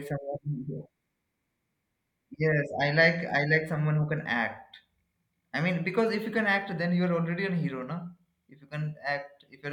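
No technical faults can be heard anywhere in the recording.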